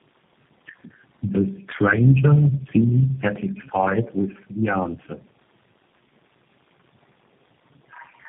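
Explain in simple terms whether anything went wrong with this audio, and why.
Something went wrong on the way: tandem speech coding. The call passed through several networks, and the speech was squeezed by a phone-line speech codec four separate times, unpacked and repacked at each hand-off, with every stage working on the already damaged result of the one before. From start to finish, the speech sounds rough, muffled and warbly, with nothing above 3.3 kHz, so the crisp top of the sound is gone.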